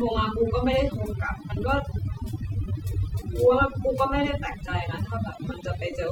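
Overdone noise removal runs through the whole speech clip. The noise reducer was pushed too hard, so any frequency band close to its noise estimate is cut almost to nothing, taking quieter parts of the voice with it. The gaps fall to near-silence sprinkled with twinkling specks.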